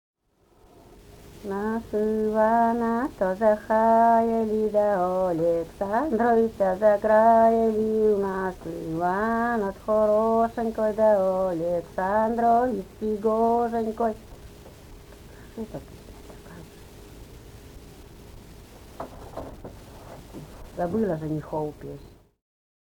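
No technical faults are audible anywhere in the recording.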